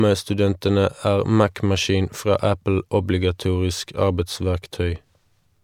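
Listening closely to the speech, nothing stood out as a technical fault at any point.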